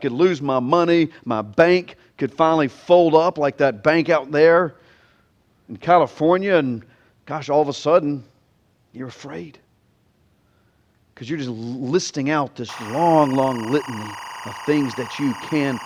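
From 12.69 s, just after "you're just listing out", a steady chirping warble sits behind the speech until the end at 15.85 s. This is timecode bleed: linear timecode, which fits 23.976-frame code, leaking from a nearby track or cable, flipping between tones near 1 and 2 kHz, roughly 15 dB under the speech.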